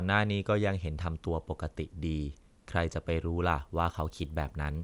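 From 3.45 s to the end, resampler restarted on every block: 20 Hz ticks at 50 ms block edges, regular and present only with signal, unlike dropouts. Fits 24 to 48 kHz.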